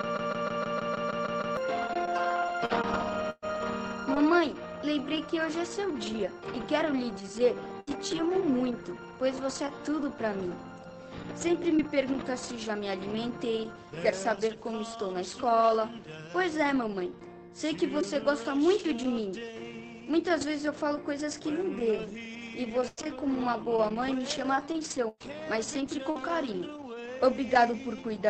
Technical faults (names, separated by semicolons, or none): broken-record loop; short stall from a late packet; lost packet rebuilt from error correction; burst of packet loss; jitter buffer speed-up; repeated packet loss (robotic sound)